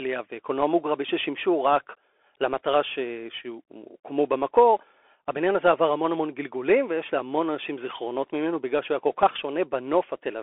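Speech, passed through a Bluetooth CVSD headset codec for its whole length. The band runs from about 300 Hz to 3.4 kHz, with nothing above 3.7 kHz. One-bit delta coding, which fits a 64 kbps stream, leaves audible damage: scratchy sibilants, granular hiss, and distortion on loud bright sounds.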